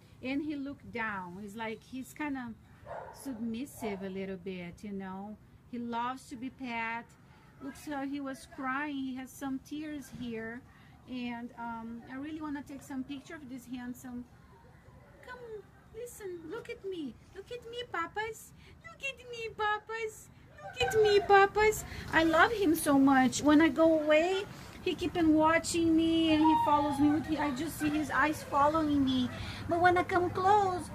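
At 20.81 s a sudden gain jump of about 12 dB lifts the sound and background noise together instantly, likely an unramped digital gain change, unlike a gradual swell.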